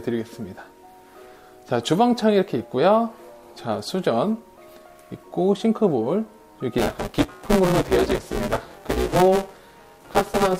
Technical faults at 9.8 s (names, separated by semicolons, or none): buffer tearing